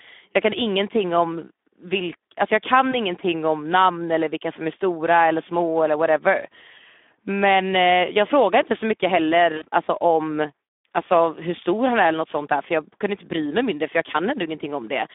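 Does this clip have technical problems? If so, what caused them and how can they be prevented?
Yes. Throughout, the Speex codec at 11 kbps makes the speech hoarse and noisy within a 250 Hz to 3.6 kHz band. Unlike plain band-limiting, it adds coarse excitation grit. Prevent it with a higher quality setting or wideband mode.

VoIP packet loss concealed by the speech codec occurs at 2.91–2.96 s, after "alltså jag" and before "ingenting om namn eller", and at 9.57–9.66 s, after "frågade inte så mycket" and before "alltså om alltså hur". Short gaps of about 20 ms and 40 ms, which fits one and two lost frames, are filled with a fading extrapolated tone or noise rather than silence or clicks, and the distortion lingers as the decoder recovers. Prevent it with a jitter buffer, forward error correction or a steadier network.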